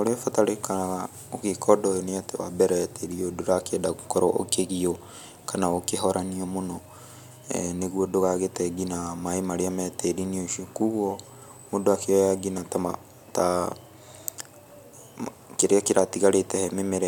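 At 13.72 s there is a single sharp click in the speech. It has the signature of dropped samples. The likely cause is a handful of samples missing from the stream, a tiny fraction of a millisecond in all. The waveform skips straight from one value to a later one. That step is too brief to remove any audible sound. It lands as one abrupt tick, a thin vertical line across the spectrum.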